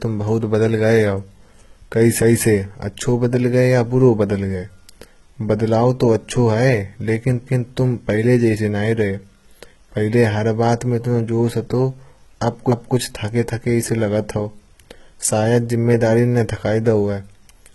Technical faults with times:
0.00-17.74 HE-AAC compression

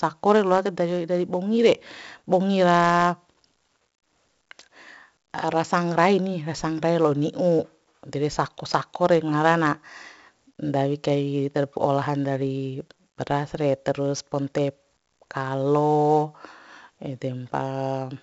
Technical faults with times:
0.00-18.23 4-bit ADPCM compression

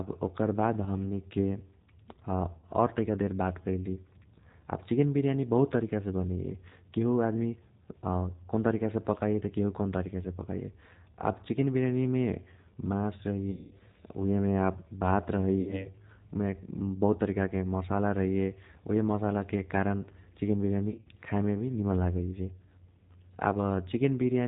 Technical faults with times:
0.00-24.48 G.729 codec
0.84-0.97 VoIP packet loss concealed by the speech codec
2.57-2.67 VoIP packet loss concealed by the speech codec
13.51-13.74 VoIP packet loss concealed by the speech codec
15.61-15.88 VoIP packet loss concealed by the speech codec
20.90-21.08 VoIP packet loss concealed by the speech codec

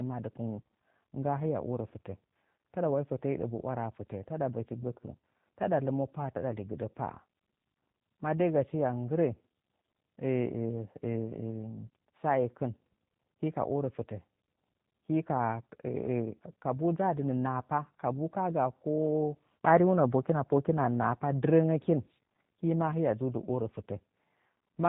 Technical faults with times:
0.00-24.88 G.729 codec

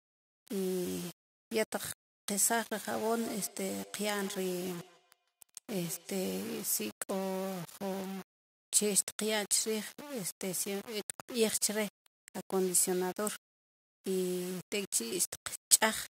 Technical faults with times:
0.00-16.09 low bit depth without dither
2.76-6.67 feedback echo between two devices

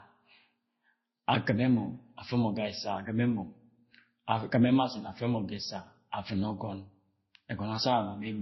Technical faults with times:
0.00-8.41 transcoding between lossy codecs

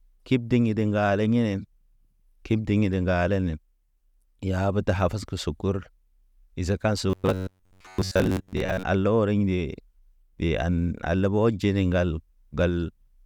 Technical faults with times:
7.10-8.84 robotic sound from repeated short buffers

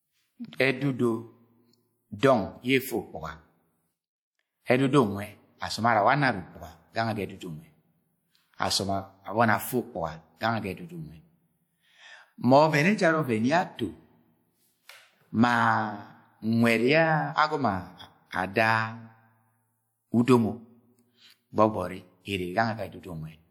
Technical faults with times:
0.00-23.51 low-bitrate audio saved at a high bitrate

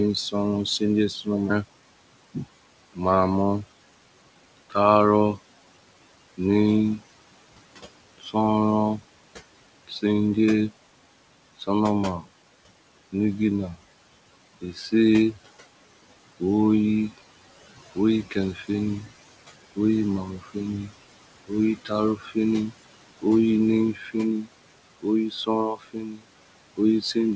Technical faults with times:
0.00-27.35 noise suppressor artifacts
0.31-2.99 speech cut by the noise suppressor
8.18-10.03 speech cut by the noise suppressor
11.58-13.14 speech cut by the noise suppressor
14.61-15.36 speech cut by the noise suppressor
16.39-27.35 speech cut by the noise suppressor

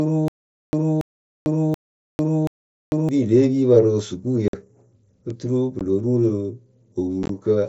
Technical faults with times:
0.00-3.09 stutter with silent gaps
4.48-4.54 unconcealed Bluetooth headset packet loss
5.79 unconcealed Bluetooth headset packet loss
7.23-7.30 unconcealed Bluetooth headset packet loss

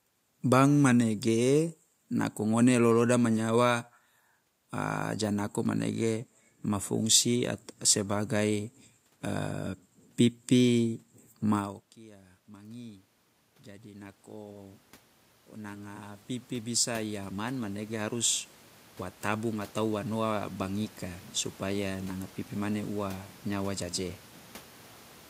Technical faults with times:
10.80-13.10 automatic gain rising
13.65-14.88 automatic gain rising
15.65-18.38 automatic gain rising
19.23-21.88 automatic gain rising

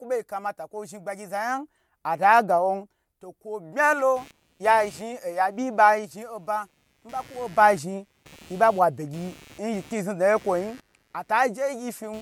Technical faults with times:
4.16-12.21 computer activity noise

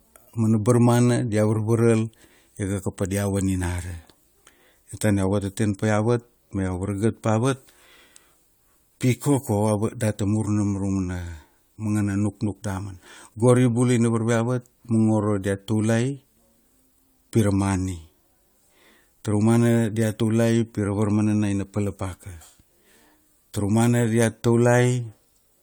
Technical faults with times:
0.00-25.63 generation loss

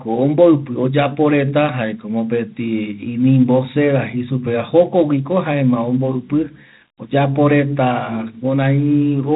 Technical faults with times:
0.00-9.36 4-bit ADPCM compression

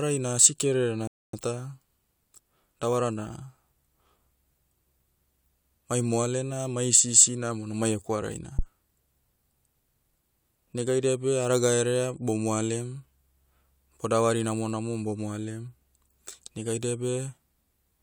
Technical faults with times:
1.07-1.33 rebuffering stall
8.59-8.65 phantom power thump

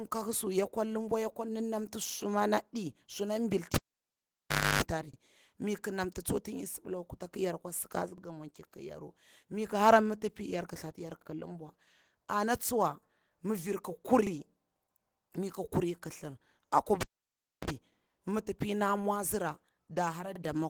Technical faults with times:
0.00-20.70 Opus voice compression
2.09-2.14 overlapping chunks
3.74-4.82 cable pulled and plugged in
5.14-5.18 overlapping chunks
8.18-8.22 overlapping chunks
11.22-11.27 overlapping chunks
14.27-14.31 overlapping chunks
17.01-17.70 cable pulled and plugged in
17.31-17.36 overlapping chunks
20.36-20.40 overlapping chunks

